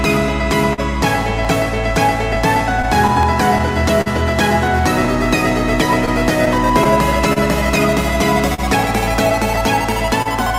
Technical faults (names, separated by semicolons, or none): clock drift between sender and receiver; clock drift buffer slips; short stall from a late packet; scattered short gaps